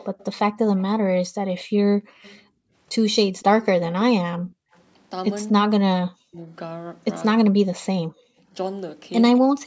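From 0.0 to 2.4 s a delayed second copy of the speech trails the main voice by 235 ms, sitting roughly 30 dB below it. This is an echo leak, likely from a loudspeaker on the far end whose echo canceller let part of the played-back voice reach its microphone and return. A fixed delay and a single repeated voice set it apart from room reverberation, which smears rather than repeats.

Overlapping its tail, from 2.01 to 2.73 s, the room background is pulled down by as much as about 35 dB, for roughly half a second in all. This is background gated by the echo canceller: the microphone was turned down while the loudspeaker played. The clue is that the ambience drops out and then comes back when the canceller releases. Unlike a network dropout, no speech content goes missing.

The echo leak returns from 3.39 to 4.81 s, again 235 ms behind the voice and about 30 dB down.

Speech suppressed in double talk follows at 4.61 to 4.73 s, 5.65 to 6.38 s and 7.48 to 9.46 s. 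The voice itself sinks by around 40 dB, briefly in the first span and for about half a second in each of the other two. The likely cause is the canceller failing to separate its own talker from the loudspeaker echo during overlap, and turning both down. Gating only dips the ambience. Here the talker's speech is what dips.

A short echo at 9.36 s arrives 216 ms late, about 25 dB down. A last background gate from 9.47 to 9.58 s drops by about 40 dB. The band stops at 8 kHz, as expected from the call's microphone processing.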